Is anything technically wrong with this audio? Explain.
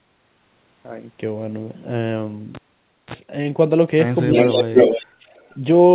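Yes. The clip, which is speech, has four kinds of fault.

Cable pulled and plugged in, 2.55 to 3.14 s: a live cable was pulled out and pushed back in. A pop marks the disconnection, then the signal falls to near silence for about 0.54 s. When only the plug tip touched the contact, a 35 ms burst of 60 Hz mains buzz got through. A second pop follows as the full connection returns and the audio resumes.

Speech suppressed in double talk, 4.29 to 4.89 s: the talker's level dips in pieces, by as much as about 20 dB at its deepest, for roughly 0.3 s in total across the span. This is likely an echo canceller facing both sides talking at once. It could not separate the near talker from the loudspeaker echo, so it attenuated everything.

Echo leak, 4.36 to 5.06 s and 5.36 to 5.56 s: a delayed copy of the voice comes back 325 ms late in the first span, at roughly the same level as the direct speech, so it is plainly audible. 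In the second span it arrives 328 ms late but far quieter, about 40 dB down. The likely cause is a far end on loudspeaker whose echo canceller let part of its microphone pickup through and returned it.

Background gated by the echo canceller, 5.06 to 5.33 s: the room sound drops by up to about 21 dB for roughly 0.3 s, then comes back. While the loudspeaker was active, the canceller clamped the microphone hard and cut the background along with the echo, before releasing it. The audio also has nothing above 4 kHz, which fits a narrowband G.711 telephone codec on the call path.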